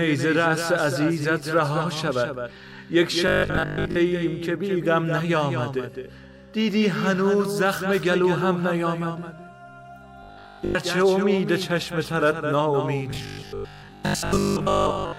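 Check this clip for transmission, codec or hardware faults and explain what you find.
One transmission fault is present, occurring three times. Robotic sound from repeated short buffers at 3.27–3.97 s, 10.23–10.75 s and 13.11–15.19 s: new audio likely arrives too seldom, so a 20 ms slice is looped in place of most of the real sound. This imposes a rigid, metallic 50 Hz buzz.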